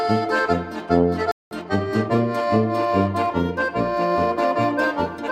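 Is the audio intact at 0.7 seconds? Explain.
Yes, at 0.7 seconds the audio runs cleanly, with no dropout, click, distortion or other fault at that point.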